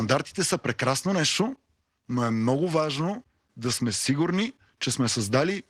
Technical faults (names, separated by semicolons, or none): none